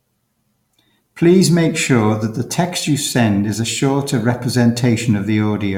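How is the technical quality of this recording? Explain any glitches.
Listening through the recording, nothing stood out as a technical problem or glitch.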